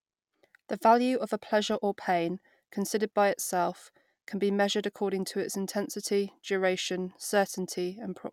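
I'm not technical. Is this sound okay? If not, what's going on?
Yes, this one sounds fine, with nothing going wrong that you'd need to worry about.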